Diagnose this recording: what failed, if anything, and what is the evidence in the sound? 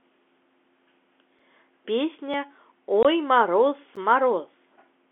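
The first problem sits at the driver or buffer stage: three blocks of digital silence. At 1.39 s the signal drops to silence for about 5 ms, at 2.34 s for under 3 ms, and at 3.96 s for about 12 ms, which fits a 512-sample buffer that wasn't filled in time. Each one switches off and back on with no fade, so you hear a tick or a tiny pop at the edges rather than a real gap.

The second problem is on the network side: packet loss filled with silence. From 3.03 to 3.05 s the speech has a clean 20 ms hole, which matches one lost packet at a typical 20 ms packetisation, and the receiver just played zeros in its place. It has hard edges, and it's long enough to register as a brief chop in the speech rather than just a tick. The G.711 telephone coding underneath is doing its usual thing, with the band held to roughly 200 Hz to 3.4 kHz.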